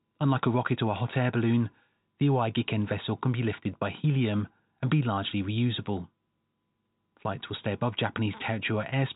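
Nothing goes wrong in this speech clip; it simply carries the usual G.711 telephone coding, so the sound tops out around 3.8 kHz, the way an ordinary phone line does.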